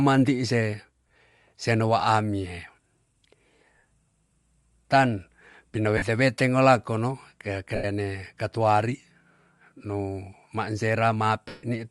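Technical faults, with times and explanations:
Throughout: Bluetooth LC3 compression. The upper spectrum has a plainly audible breathy, grainy edge, likely from LC3 encoding at a rate that fits roughly 48 kbps with 7.5 ms frames. A spectrogram shows sparse, noise-filled patches above the fully coded lower band.
1.09–1.18 s, 3.78–3.83 s, 5.97–6.02 s, 7.75–7.84 s, 11.48–11.63 s: lost LE Audio frames. About 52, 52, 45, 82 and 150 ms of audio went missing. In the first event the gaps are scattered across 90 ms, none longer than about 15 ms. The decoder repeats the last spectrum with randomised signs, so the sound turns into a noisy smear that fades as the gap lengthens, and the 150 ms loss sinks audibly toward silence. On a spectrogram these are blurred, structureless vertical blocks. On the waveform the envelope flattens and then decays.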